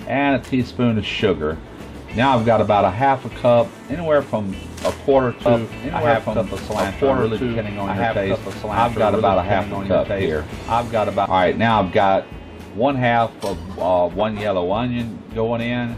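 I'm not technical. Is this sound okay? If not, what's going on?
No. From 5.46 to 11.26 s, everything plays twice, an equally loud copy following about two seconds behind. This doubled audio track likely comes from the sound being recorded twice.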